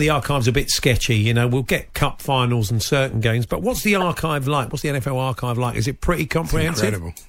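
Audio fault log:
4.01 s, corrupt frame decoded: a single sharp blip cuts through the speech, with an error peak around -5 dBFS, and lasts about one compressed frame. Damaged bits in that frame made the decoder read wrong gains or spectral codes, so energy landed at frequencies the speech never had. Unlike a dropout or concealed lost packet, a foreign, tonal-noisy burst appears, and it has more spectral body than a plain click.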